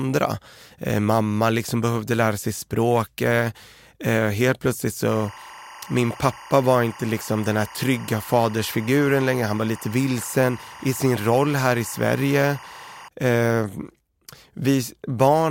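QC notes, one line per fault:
5.08–13.08 s, timecode bleed: a chirping warble sits roughly 20 dB under the speech, flipping between pitches near 1 kHz and 2 kHz as linear timecode leaks in from an adjacent track or cable. Its bit pattern repeats every frame, and the rhythm fits 23.976 fps code. Unlike a single-tone whistle or mains buzz, it alternates between two pitches in a regular ticking pattern, then stops abruptly at 13.08 s.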